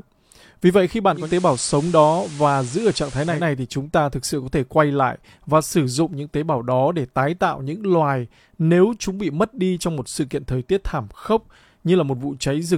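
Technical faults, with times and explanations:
1.12–3.47 s, digital radio blending to analogue: after "vậy khi" the receiver lost the digital stream and cross-faded over about 233 ms to the station's FM broadcast, returning before "thì chúng ta thực". Hiss rises to about 20 dB below the speech, with no level change.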